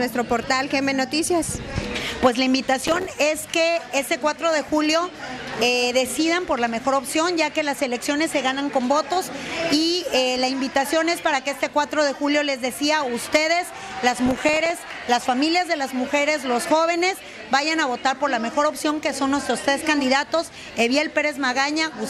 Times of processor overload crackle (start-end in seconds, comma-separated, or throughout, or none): 2.81-3.10, 14.19-14.70